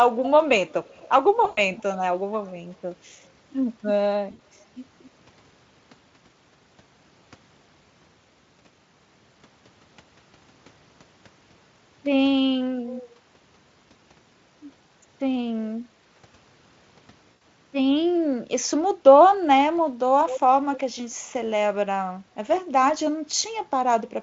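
From 0.24 to 0.3 s and again from 0.69 to 1.08 s, a faint copy of the speech trails the original by 236 ms. It recurs from 1.75 to 2.0 s and from 2.46 to 2.5 s, then from 12.87 to 13.14 s and from 20.29 to 20.4 s. It ranges from barely audible, around 35 dB down, to fairly clear, around 10 dB below the direct sound at 20.3 s. This is echo leak, likely from a far-end loudspeaker whose echo canceller let part of the microphone pickup return. It differs from room reverberation in two ways: the delay is a fixed 236 ms every time, and it comes in scraps rather than as a smooth tail.

Packet loss concealed by the speech codec breaks in from 1.45 to 1.61 s, 4.31 to 4.39 s and 17.31 to 17.41 s, gaps of 120, 80 and 100 ms. This fits runs of roughly four to six 20 ms frames. The decoder extends the last pitch and spectral shape, so the sound becomes a buzzy tone or a coloured noise that fades. Unlike the echo, nothing earlier is repeated. 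The sound freezes and decays, and it stays weak briefly after the stream resumes. The Speex coding itself adds little audible damage.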